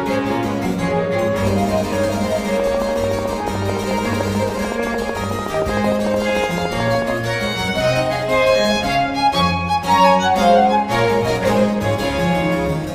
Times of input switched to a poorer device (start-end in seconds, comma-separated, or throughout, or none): none